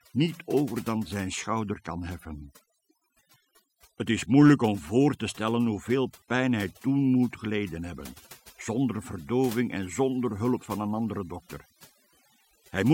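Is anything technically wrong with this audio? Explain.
Yes. The speech carries overdone noise removal from start to finish. A noise reduction stage set far too aggressively is cutting individual frequency bands deep down, or out entirely, whenever their level sits close to what it has judged to be noise. Low-level parts of the voice fall below that threshold and are removed along with the noise. The gaps between phrases collapse to near silence dotted with twinkling, chirpy specks.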